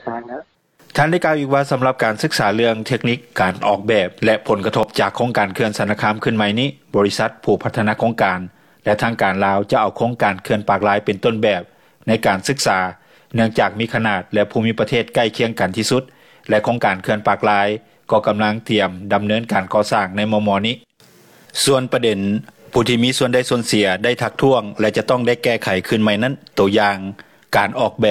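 Three tiny skips show up, at 4.83–4.86 s, 10.81–10.84 s and 22.76–22.78 s, each dropping roughly 25 to 40 ms where the waveform jumps. That's overlap between stream segments: overlapping timestamps on the 6-second segments made the player trim audio that wasn't actually duplicated.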